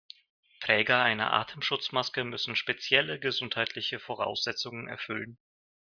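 Nothing in this bit of speech stands out as a technical fault; it just runs along without anything going wrong.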